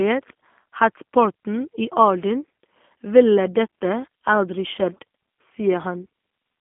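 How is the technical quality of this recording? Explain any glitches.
The technical quality is limited by one fault running through the whole speech clip: G.729 codec damage, clearly audible throughout. The sound sits in a telephone band of roughly 200 Hz to 3.4 kHz. Inside that band it is rough and slightly synthetic, which points to an 8 kbit/s G.729-family coder. The codec rebuilds each 10 ms frame from a vocal-tract filter, a pitch predictor and a few sparse pulses, so fine waveform detail is replaced by an approximation. A plain telephone filter would narrow the band the same way but would leave the speech smooth, not buzzy and artificial.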